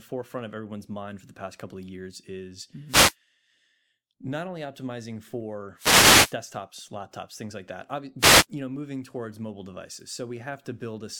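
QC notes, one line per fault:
2.87–3.15 s, 5.76–6.36 s, 8.19–8.46 s: wireless microphone noise hit. Short bursts of static cover the speech as the FM radio link fades and the receiver's noise rises.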